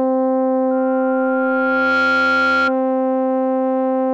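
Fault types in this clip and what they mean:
Loudspeaker feedback squeal: a microphone is hearing the loudspeaker it drives, and at 1.4 kHz the loop gain passes one, so that frequency feeds on itself. From 0.71 s a single pure tone swells over about a second and a half until it sits roughly level with the music, then stops at 2.74 s. The slow self-reinforcing swell, rather than a steady or instant onset, sets it apart from a test tone or interference whine.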